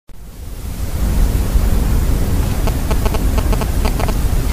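From 2.67 s to 4.10 s, GSM signalling bursts break in: a nearby 2G phone's radio pulses are rectified by the audio circuit into a galloping dit-dit-dit of short 217 Hz buzzes, roughly as loud as the wanted sound. Unlike steady mains hum, it arrives in stuttering clusters.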